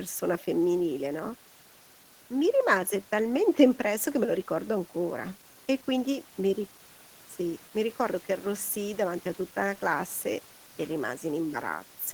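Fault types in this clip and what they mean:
No technical faults can be heard in this speech recording, and the signal stays continuous and steady throughout.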